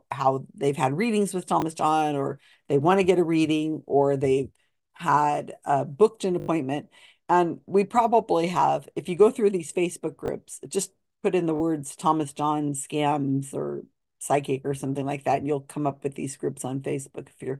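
Audio arrived late, so the device replayed its last chunk (repeated buffer, fitting 20 ms): hard-joined repeats at 1.60–1.62, 6.40–6.48, 10.26–10.28 and 11.56–11.60 s.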